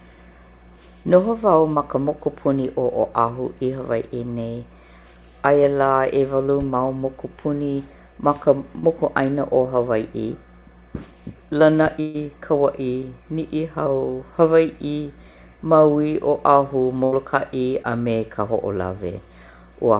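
At 1.74 to 1.78 s, just before "ma ka mokupuni", there is short concealed packet loss. About 20 ms never arrived in time. The receiver extended the last sound, which leaves a brief smear. The same happens at 8.80 to 8.85 s. At 12.01 to 12.16 s there is a burst of packet loss. About 140 ms is missing, and the gap is filled by a held, fading continuation before the speech resumes further on. A shorter burst at 17.04 to 17.14 s drops about 80 ms in the same way. At 17.82 to 17.86 s, just before "a me", another short concealed loss leaves a brief wobble. The whole clip is limited to 4 kHz, which points to a narrowband call codec.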